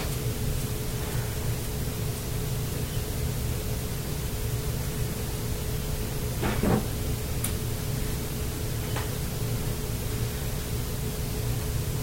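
At 0.32 s, 2.96 s, 4.64 s and 7.08 s the audio jumps forward, and there is no gap of silence at any of them. Each is likely a dropped buffer (overrun), where samples were overwritten before being read, so the sound on either side is butted together. The skips at 0.32 s and 4.64 s lose only a few tens of milliseconds. The one at 2.96 s is longer, and 7.08 s cuts out about a tenth of a second.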